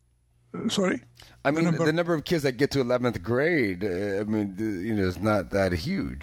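From 3.23 s to the end, the speech abruptly slows to about 0.72 times its pace while pitch holds steady, so it drags: a time-stretched section, likely from software repeating short pieces to lengthen it. A spectrogram shows elongated, blurred harmonics; the waveform shows drawn-out, repetitive envelopes.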